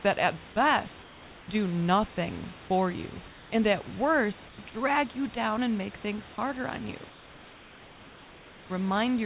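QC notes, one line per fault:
1.02–1.48 s, 3.28–3.52 s, 4.48–4.58 s and 7.1–8.7 s: comfort noise in place of the background. The room hiss in each pause turns steady and featureless, about 2 to 3 dB quieter. The gaps come after "that at", after "do nothing for you", before "drag you down and", and near the end. Likely discontinuous transmission. The sender stopped during silence, and the receiver filled the gap with synthetic noise, all within a band ending at 4 kHz.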